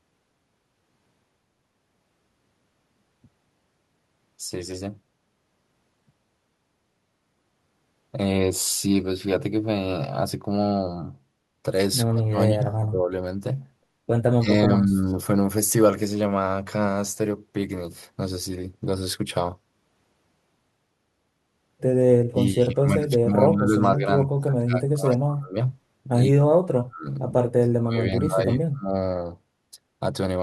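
Between 12.1 and 13.1 s the speech sinks sharply, by around 30 dB. It drops again from 14.32 to 14.98 s. This is speech suppressed in double talk. With both sides talking at once, the echo canceller likely took the local talker for echo and turned everything down.

From 15.04 to 15.14 s comes an echo leak. A brief, very faint copy of the voice arrives about 120 ms late. It is likely residue the canceller failed to remove from a loudspeaker path.

The suppression returns at 22.2 to 24.08 s, 24.26 to 25.56 s, 26.27 to 27.06 s and 27.56 to 28.94 s. Each time the speech falls away, at worst by about 40 dB.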